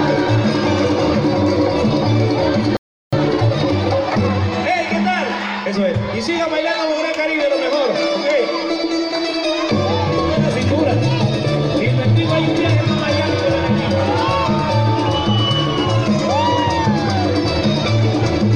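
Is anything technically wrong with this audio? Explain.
Yes, there are two linked faults.

From 2.77 to 3.13 s there is a playback stall: the sound halts mid-flow and goes silent for about 0.36 s. The likely cause is the player running out of data or its thread being blocked. Unlike a brief dropout, it is a sustained gap that clearly interrupts the flow.

From 3.13 to 4.55 s comes time-compressed catch-up: the player trims its backlog by removing small pieces and cross-fading the joins, so the audio runs about 1.25 times faster. The pitch stays normal, which sets it apart from a plain speed-up that would raise the pitch.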